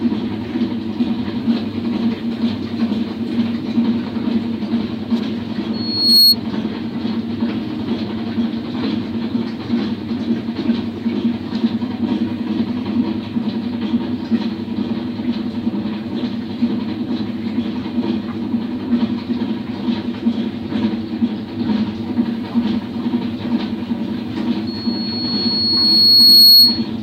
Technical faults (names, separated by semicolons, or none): loudspeaker feedback squeal